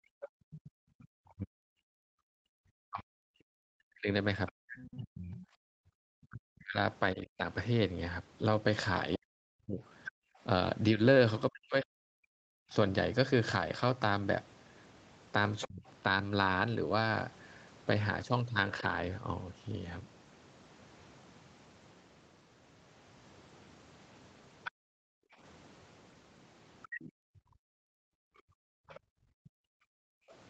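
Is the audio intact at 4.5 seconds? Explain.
No. At 4.5 s the speech sits inside a long stretch, from 1.33 to 15.85 s, where it is pulled down in pieces, most likely speech suppressed in double talk. With both ends talking at once, the echo canceller could not tell the local talker from the loudspeaker echo and attenuated everything, by up to about 40 dB. Across roughly seven seconds in total the voice dips, dulls and breaks up. On a waveform the envelope collapses in chunks; on a spectrogram the harmonics fade or vanish in patches, upper bands first.

From 4.47 to 4.94 s a second, fainter voice comes through, likely the other side's voice leaking through: the far end played on the loudspeaker was not fully cancelled from the microphone. It sits around 20 dB below the main speech. A spectrogram shows a weak, separate set of harmonic traces that do not line up with the main talker's pitch. 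The waveform shows low-level ripple riding under or between the main speech.

Overlapping this, from 4.52 to 5.87 s, the background is gated by the echo canceller. While the loudspeaker was active the microphone was clamped hard, so the room tone drops out, by up to about 37 dB, in brief holes adding up to a few tenths of a second. On a spectrogram the noise floor goes dark in sharp-edged vertical gaps. On a waveform those gaps are near-flat lines that snap back when the canceller releases.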